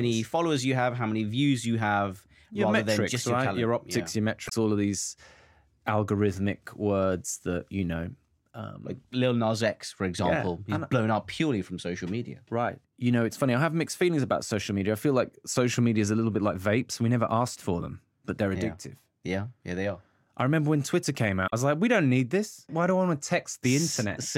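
At 4.46 to 4.53 s, just before "all of these", and again at 21.46 to 21.53 s, just before "I was like we", the speech breaks into a brief glitch of about 70 ms from damaged data in a compressed stream: corrupted frames desynchronise the decoder until it finds valid frame headers again.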